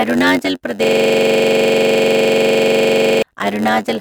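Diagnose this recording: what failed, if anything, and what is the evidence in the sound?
At the driver or buffer stage, one process writes shorter blocks than the next one reads, and the shortfall in each block is padded with silence. Throughout the speech this produces a steady 91.9 Hz buzz at the block rate, because a tiny gap lands in every block. The inserted zeros also stretch the timeline, so the speech plays at 0.919 times normal speed, about 8 percent slow, while its pitch stays roughly natural.

A system hang loop also occurs. From 0.84 s to 3.22 s the host or driver stalled, but the audio hardware kept replaying the same ring buffer. A single 42.67 ms slice of speech, which fits a 2048-sample buffer, repeats exactly, about 56 times, at 23.4 Hz. That is too slow to merge into a tone, so it comes through as a rapid machine-gun stutter until the system recovers and normal playback resumes.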